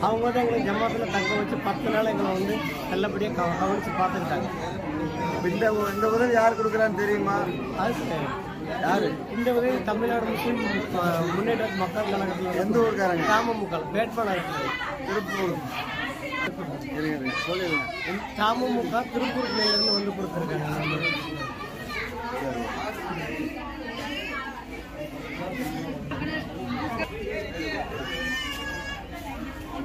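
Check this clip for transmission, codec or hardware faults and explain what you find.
There is one fault, a loudspeaker feedback squeal from 19.38 to 20.09 s. A microphone is picking up the loudspeaker it feeds, and at 5.3 kHz the loop gain tops one, so that frequency reinforces itself on each pass. It swells over roughly a third of a second into a piercing whistle that ends up a few dB above the surrounding audio. A spectrogram shows a single bright horizontal line at 5.3 kHz, and the waveform's envelope visibly balloons.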